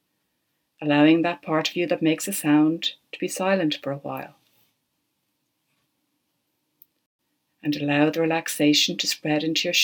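At 7.06 s there's a digital broadcast dropout: the sound fades out over about 3 ms and stays silent until 7.19 s, then picks up further along in the programme. That's the receiver muting because a handful of frames either didn't arrive or failed their checksum, and the roughly 128 ms gap fits about three lost frames. What was sent during it never came through, so that stretch is just gone, not smeared or concealed.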